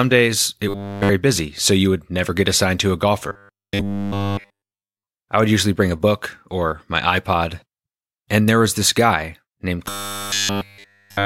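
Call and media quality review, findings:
Robotic sound from repeated short buffers, 0.69–1.1 s (before "busy so you would"), 3.29–5.07 s (after "get assigned to a"), 9.86–11.25 s (after "was this guy named"). Rigid 100 Hz buzz, likely a starved jitter buffer looping roughly 10 ms chunks, with essentially all real audio skipped.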